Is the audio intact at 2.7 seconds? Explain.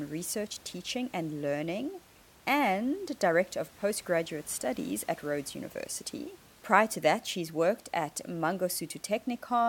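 Yes, the audio is intact at 2.7 seconds, with only the room's own background noise sitting about 26 dB below the speech, as the recording captured it.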